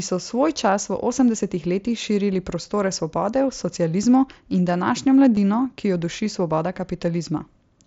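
Speech recorded over a Bluetooth headset link, with the mSBC codec's 8 kHz ceiling showing as a flat top edge on a spectrogram, has one concealed Bluetooth headset packet loss at 5.35 s. About 15 ms of audio went missing, which fits a couple of lost packets, and the receiver patched the gap by repeating the best-matching recent stretch of waveform. A waveform shows a brief, overly regular repeated cycle at steady level, and a spectrogram shows a thin vertical strip of too-even harmonics.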